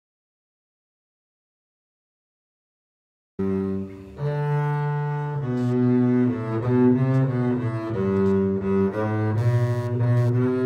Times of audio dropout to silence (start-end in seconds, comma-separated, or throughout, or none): 0.00-3.39